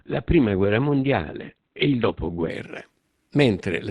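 From the start to 2.5 s this is an adaptive stream starting at a low bitrate: the player opened on a cheap version of the stream to begin quickly, then switched up once it had gauged the connection. Until then the speech is dull and smeared, with nothing above 4.3 kHz and stronger codec artefacts that fit an Opus encode near 12 kbit/s. At 2.5 s the quality jumps without a gap to something nearer 64 kbit/s.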